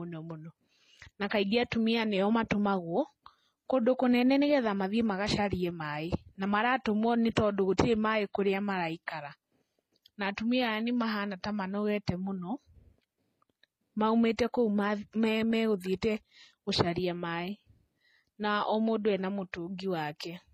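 Throughout, the speech carries stacked compression artefacts with nothing above 14.8 kHz, likely transcoding between lossy codecs, consistent with MP3 followed by low-bitrate HE-AAC.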